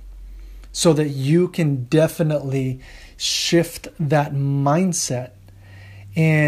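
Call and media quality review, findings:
No audible faults found in the speech recording; nothing to flag for follow-up.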